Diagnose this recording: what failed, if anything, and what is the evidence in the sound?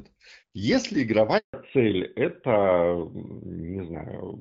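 The network dropped out during a handover gap: at 1.38 s the speech fades within a few tens of milliseconds and stays silent until 1.54 s, about 160 ms. That's the call hopping links with no speech frames arriving in between, so whatever was said there is simply gone.

Right after, at 1.54 s, there's a fallback to narrowband at the codec stage: the top end vanishes, with nothing above 4 kHz through to the end, and the sound turns duller and rougher. Before the switch it had the lightly coded HD Voice band; afterward it fits AMR-NB at 12.2 kbit/s.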